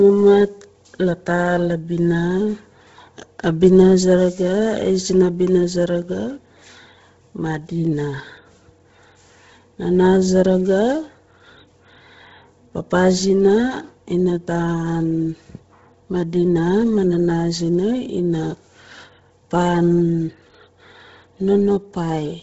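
Throughout, the speech sounds grainy and breathy, with noise-filled highs ending near 7.7 kHz, likely Bluetooth LC3 compression; a plain low-pass would dull, not hiss.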